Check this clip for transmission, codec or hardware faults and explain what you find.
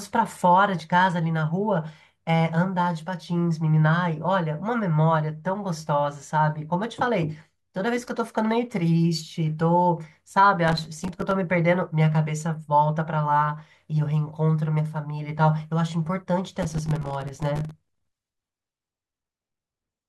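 There's one fault here, processor overload crackle, at 10.68–11.32 s and 16.62–18.07 s. The processor keeps missing deadlines for buffers of a few milliseconds, dropping dozens to silence, so the speech tears into gritty crackle.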